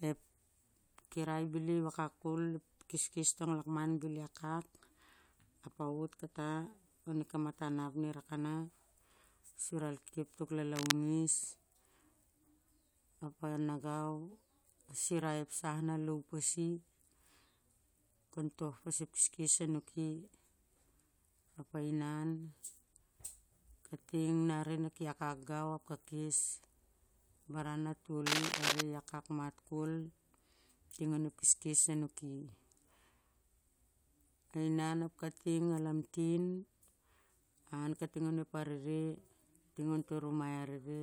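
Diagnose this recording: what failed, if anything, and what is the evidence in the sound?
Cable scratch noise points to the analogue wiring. At 10.76–10.92 s and 28.26–28.81 s, dense, uneven crackle rides over the speech, somewhat louder than it. A spectrogram shows ragged broadband smears, and the waveform shows jagged bursts. The likely cause is a worn connector being moved, its contact resistance jumping.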